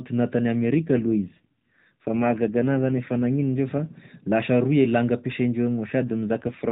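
It's a speech clip over an AMR narrowband mobile link, and it has an AMR rate drop twice, from 0.62 to 3.54 s and again from 6.00 s to the end. The band stays the same, but the voice turns rougher and buzzier, which fits the codec stepping down from around 12.2 to 5.9 kbps.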